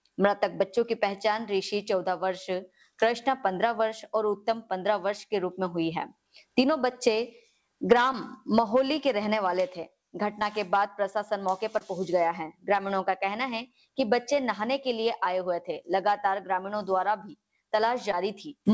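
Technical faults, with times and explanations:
6.90, 8.12–8.14, 10.39–10.41, 11.78–11.82, 16.56–16.58 and 18.12–18.14 s, short concealed packet loss: about 10 ms of audio (20 ms at 11.78 s) arrived too late for the decoder, so the receiver extended the preceding sound and crossfaded back, leaving a brief smear or wobble.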